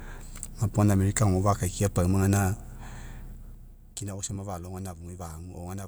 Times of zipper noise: 3.25-4.09

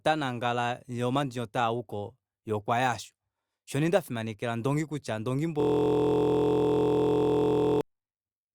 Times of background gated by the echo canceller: none

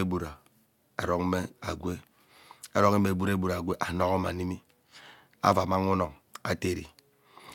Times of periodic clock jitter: none

